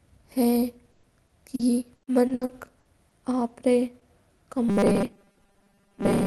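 From 0.91 to 3.13 s the speech breaks up with repeated packet loss, giving a robotic sound. Nine gaps appear, about 460 ms in all and the longest 120 ms. Each gap is patched by stretching the last sound. Only around a tenth of a second is roughly rebuilt. The rest sounds choppy.

At 3.49 to 3.51 s, one lost packet is rebuilt from error correction. The following packet carried a low-bitrate Opus copy, so nothing drops out. That 20 ms frame sounds rougher and noisier.

Between 3.99 and 4.03 s comes a short concealed packet loss. About 20 ms never arrived in time. The decoder continued the previous sound to cover it, then blended back. It comes across as a brief smear or wobble.

From 4.69 s to the end at 6.26 s, the speech becomes a rigid metallic buzz near 200 Hz. It still loosely follows the speech. The likely cause is robotic sound from repeated short buffers. Chunks of about 5 ms are replayed over most of this stretch, while the real audio is skipped.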